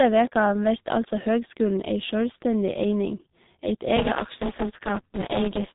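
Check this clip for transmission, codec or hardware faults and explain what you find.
The speech carries one codec fault, present from start to finish: G.723.1 codec compression. Every sound is squeezed through a low-rate vocoder running on 30 ms frames, which fits a stream near 6 kbit/s. Nothing survives above 4 kHz, so speech sounds muffled and hoarse, with smeared consonants. A spectrogram shows a hard ceiling at 4 kHz and blocky, frame-stepped harmonics. The waveform looks smoothed, missing sharp onsets.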